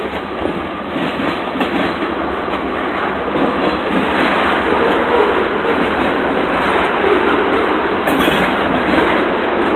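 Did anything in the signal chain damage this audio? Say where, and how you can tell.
No, nothing in the signal chain audibly damaged this audio.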